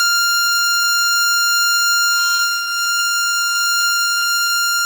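At 1.75 to 1.79 s there is a short concealed packet loss: about 20 ms of the music arrived too late or not at all, and the receiver covered the hole by extending the sound that came just before it, then crossfading back into the real signal. Almost all of the missing stretch was filled, so the result is a brief smear or wobble in the texture rather than a dropout.

From 2.35 to 4.50 s the stream suffers repeated packet loss, producing the robotic sound typical of sustained concealment. Around a dozen separate holes fall within this span, the longest about 36 ms, together removing roughly 260 ms of audio, about 12 percent of the stretch. Each gap is bridged by continuing the preceding sound, and the next arrives before the music settles, so the passage turns choppy, with fragments audibly missing.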